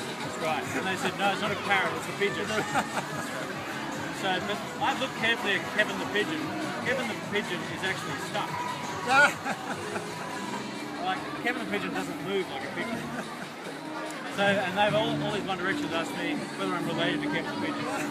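No technical faults can be heard anywhere in this audio.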